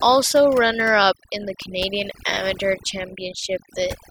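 From start to finish there's overdone noise removal: the denoiser was pushed too hard, so any frequency band sitting near its noise estimate gets gated down or out, quiet parts of the speech included. The gaps drop to near silence with twinkly specks.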